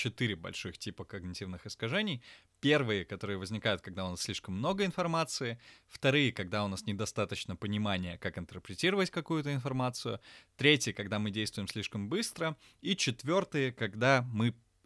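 No faults detected anywhere in the speech; nothing to flag.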